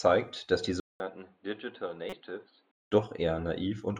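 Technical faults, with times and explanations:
0.8–2.91 s, input switched to a poorer device: right after "dass die" the sound drops out for about 200 ms, then returns dull and boxy, with nothing above 4.5 kHz, roughly 10 dB quieter, and carrying a new noise floor only about 35 dB below the signal. The likely cause is the system changing to another microphone or a headset's call profile, whose narrower band and own level and noise replace the original input until the sound clears again at 2.91 s.
2.10–2.13 s, corrupt frame decoded: a single compressed frame arrived with damaged bits and the decoder played it regardless, so misread gains and codes placed energy at the wrong frequencies for the length of that frame. The result is a short blip of stray noise, peaking at about −25 dBFS, lasting under 40 ms and falling inside the dull stretch from the device switch.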